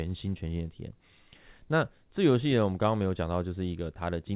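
Nothing's actually wrong with this bit of speech: it came over a call link using G.711 mu-law, so the top end stops at 4 kHz as that codec always does, but there's no fault to point at anywhere in it.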